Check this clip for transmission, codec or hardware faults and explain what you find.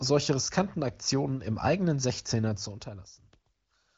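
Nothing wrong can be heard in this speech: the smooth level changes shift gradually, as a fader would, and the AMR wideband (HD Voice) coding leaves at most faint traces, with no content above about 7.6 kHz, which fits its high 23.05 kbit/s mode.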